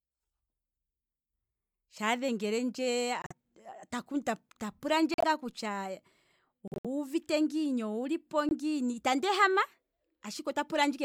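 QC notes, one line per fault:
3.22–3.32 s, corrupt frame muted: a 0.10 s hole opens abruptly. The decoder rejected damaged frames and the player filled silence.
5.13–5.24 s, corrupt frame muted: the same abrupt silence, 0.11 s.
6.68–6.86 s, corrupt frame muted: 0.18 s gap before "ngiini owulipo".
8.49–8.53 s, corrupt frame muted: brief 0.04 s dropout after "ngiini owulipo", before "itandi ehama". Timing holds.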